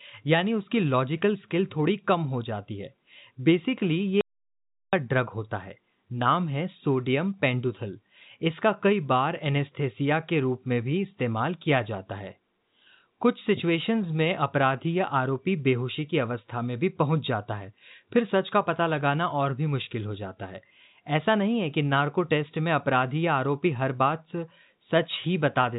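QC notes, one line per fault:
4.21 to 4.93 s, audio dropout to silence: the speech cuts off mid-flow and resumes after 0.72 s. The gap holds silence with no room tone, so that stretch is lost. The likely cause is a lost input while recording continued.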